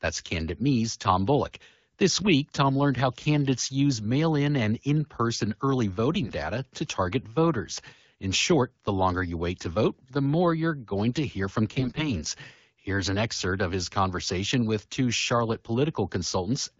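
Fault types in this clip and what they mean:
AMR bit errors: corrupted low-priority frame bits misplace the excitation pulses and skew pitch, gain and spectral detail, so speech turns hoarse and gargly after "and in person early" and more harshly after "going to hear from". Unlike lost packets, level and pitch continue without dropouts.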